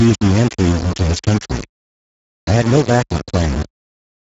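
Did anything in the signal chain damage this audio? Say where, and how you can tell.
Yes. Low bit depth without dither runs through the whole clip: gritty, grainy distortion that tracks the speech, with noise only about 10 dB below the signal and quiet passages sputtering. That points to a sample-format conversion stage, likely rounding to roughly 3 bits.

The Speex codec damage is also present from start to finish: hoarse, noisy speech with plainly audible coding artefacts and nothing above 7.7 kHz. The thin excitation is typical of a low-rate CELP encode, which fits a bitrate near 10 kbps.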